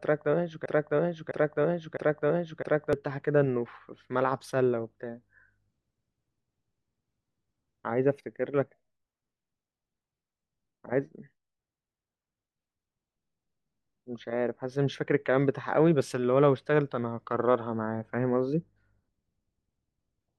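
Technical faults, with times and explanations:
0.66–2.93 s, broken-record loop: a 0.66 s piece of speech plays three times back to back, identical, likely from a stalled player or stream resending its last fragment. Unlike an echo, nothing overlaps or decays, and the speech meant for that span is lost.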